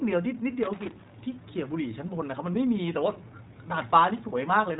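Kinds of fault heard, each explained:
iLBC codec: the whole clip sounds like it went through this narrowband VoIP codec. Nothing comes through above about 3.8 kHz, and each 20 ms frame is coded on its own, so the speech has a clearly audible rough, slightly synthetic edge. The rate sounds like the 15.2 kbps mode.
Loose connector crackle: from 0.63 to 1.12 s there's an irregular burst of scratchy crackle. It sounds like a worn or dirty contact shifting and rapidly making and breaking. That chops the signal into ragged fragments.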